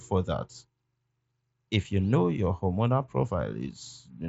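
The speech has no technical faults to describe; its top end stops near 7.7 kHz, as expected from a Bluetooth mSBC headset link.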